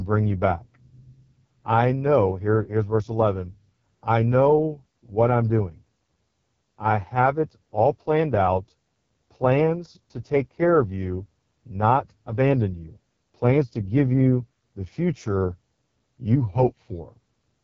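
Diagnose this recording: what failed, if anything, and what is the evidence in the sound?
AMR wideband (HD Voice) codec damage runs through the whole clip. The speech is rough and raspy, with nothing above about 7.5 kHz, which fits the codec's lowest 6.6 kbit/s mode. That mode models the vocal tract coarsely, and the band above 6.4 kHz is only shaped noise.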